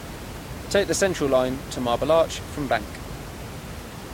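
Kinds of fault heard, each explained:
No faults can be heard anywhere in this recording.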